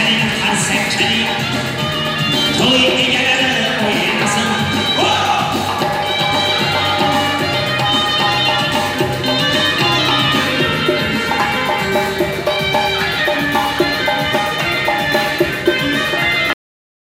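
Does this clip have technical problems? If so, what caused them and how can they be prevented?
Yes. At 16.53 s the sound stops abruptly in the middle of an event and falls straight to digital silence, with no natural decay, and that dead silence runs to the end at about 17.08 s. This is a cut-off end: the final buffers of audio were never written to the file or never played out, so the recording ends wherever the last completed buffer happened to stop. To prevent it, flush and close the recorder or encoder properly before stopping, and leave a short tail of extra recording after the wanted material.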